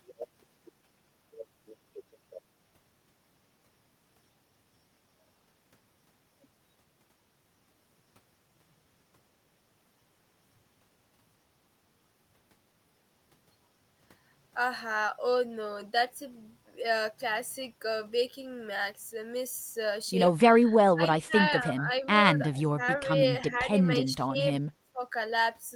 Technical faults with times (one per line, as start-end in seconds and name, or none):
20.93-21.35 speech suppressed in double talk
21.74-22.06 speech suppressed in double talk
22.50-22.82 speech suppressed in double talk
24.01-24.44 speech suppressed in double talk
24.92-25.00 speech suppressed in double talk